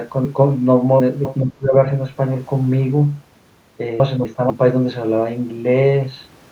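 From 0.25 to 1.25 s the speech has chunks out of order. One 250 ms chunk plays three chunks late, after the audio that should follow it, so the passage sounds jumbled. On the waveform, abrupt discontinuities appear at 250 ms boundaries.

From 1.4 to 1.75 s the level drops by roughly 25 dB, and the upper frequencies thin or break into fragments. This is likely speech suppressed in double talk, where an echo canceller mistakes overlapping talk for echo and turns it down. It shows as a hollowed-out envelope and faded harmonics.

From 4.0 to 4.5 s, two 250 ms chunks play swapped, one chunk late, with the same hard joins.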